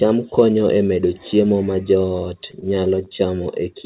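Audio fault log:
2.06–3.19 s, repeated stalls (stutter): packets kept reaching the receiver late, so its jitter buffer ran dry about ten times in this stretch, and each time it stretched out the last bit of sound to cover the wait. The gaps are short, none longer than about 14 ms and roughly 110 ms in all, or about a tenth of the span, so nothing is lost, but the speech drags and catches unevenly. The whole clip is band-limited to 4 kHz, which points to a narrowband call codec such as G.711.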